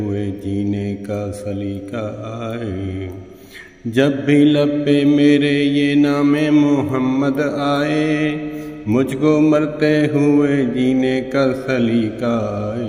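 No technical faults can be heard anywhere in this audio.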